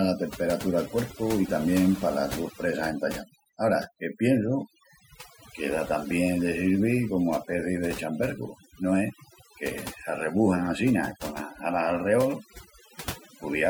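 Overdone noise removal runs through the whole speech clip. Bands near the noise estimate are cut away. The background drops and breaks up into twinkling specks.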